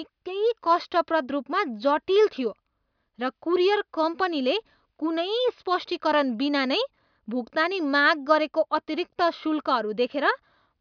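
No technical faults are audible.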